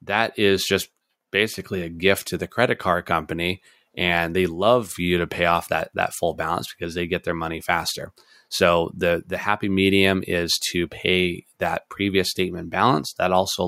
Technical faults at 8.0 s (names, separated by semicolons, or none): none